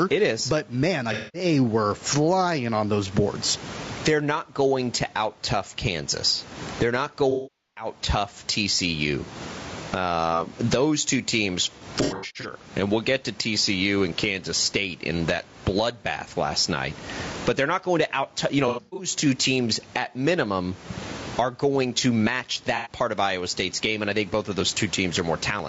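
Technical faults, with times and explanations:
Throughout: gain pumping. The level is squashed so loud and soft parts sit closer together, with a gain swing of around 25 dB, while the room's background noise sits about 36 dB below the speech. This is likely a gain set far too high with a fast limiter clamping it. Unlike steady compression, the gain is pulled down on every loud sound.
Throughout: low-delay AAC compression. The speech sounds rough and grainy, with noise filling the gaps between harmonics and a thin, synthetic-sounding top band, likely from AAC-ELD at 32 kbps. Its short frames resolve pitch poorly, which makes it harsher than ordinary AAC at the same rate.
1.13–1.45 s, 7.31–7.87 s, 11.78–12.52 s, 18.68–19.09 s, 22.76–22.90 s: AAC frame loss with concealment. Short stretches turn smeared, noisy and phasey as the decoder rebuilds audio from the last good spectrum. The longest gap, 450 ms between "tough kansas they're not" and "tough tcu", fades toward silence before recovering. 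Around "uh those two teams", loss of about 330 ms is scattered over 660 ms in bursts. At 18.68 s, 240 ms is scattered over 300 ms. Before "part of", only 90 ms is lost. Unlike dropouts, these patches keep a blurred, garbled imitation of the sound rather than cutting out cleanly.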